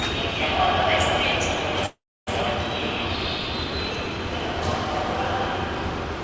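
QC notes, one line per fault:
1.86–2.29 s, call audio freeze: the last sound stretches into a fading buzz or hiss, then 280 ms of silence, and the audio resumes where it stopped, likely from an emptied jitter buffer. Unlike a dropout, nothing is skipped. Everything after simply plays 0.41 s late.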